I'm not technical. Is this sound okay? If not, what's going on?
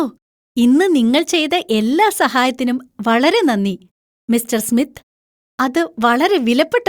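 Yes, this sound is okay, and nothing is going wrong in it.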